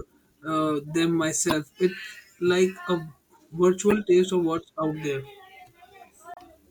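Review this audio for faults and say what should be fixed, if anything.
Damaged data in a compressed stream causes three short glitches in the speech, at 1.49–1.52 s, 3.90–3.93 s and 6.34–6.38 s, each 26–44 ms long. Corrupted bytes there make the decoder misread frames and lose sync until it finds the next valid frame header. On a spectrogram each shows as a narrow vertical smear of broadband or oddly banded energy; the waveform shows an abrupt discontinuity. Re-fetch or re-encode from an intact source, and use checksummed, error-checked transport to prevent it.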